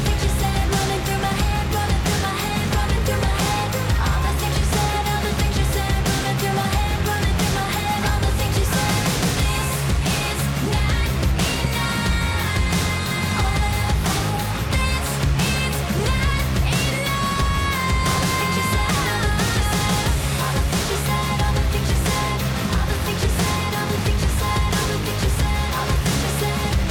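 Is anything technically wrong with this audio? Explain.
Yes. From 11.6 to 11.9 s there is a loud pop, two sharp pops around 10 dB above the audio, likely from a voltage pulse such as a switch or static, while the sound continues underneath.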